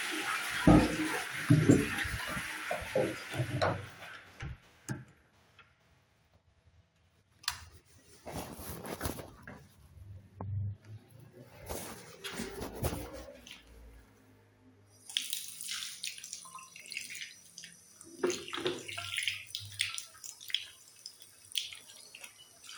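At 2.18 s, 8.93 s and 16.8 s the sound breaks into a brief chirp, squawk, click or short hole, each lasting under 20 ms. These come from damaged data in a compressed stream. Corrupted bytes make the decoder misread the frames there and lose sync until it finds the next valid frame header.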